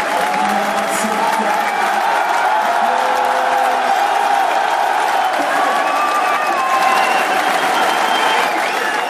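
A doubled audio track runs from 6.73 to 8.47 s: a second, full-band copy of the sound trails around 150 ms behind at roughly equal loudness, with no decay or room colour, likely from a slower capture path or misaligned edit, and cuts in and out abruptly.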